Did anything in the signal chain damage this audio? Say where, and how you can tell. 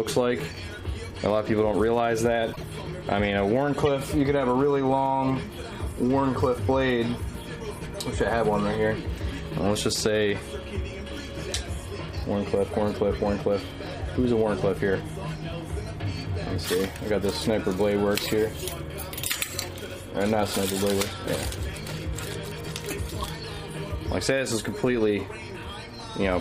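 Yes, at the codec stage: corrupt frames were decoded, giving short chirps and noise bursts at 2.53–2.63 s, 3.73–3.88 s, 16.80 s and 23.10–23.24 s, peaking around -25 dBFS for the first and -20 dBFS for the others. Flipped bits misplace spectral energy, unlike dropouts, which go silent or are concealed smoothly.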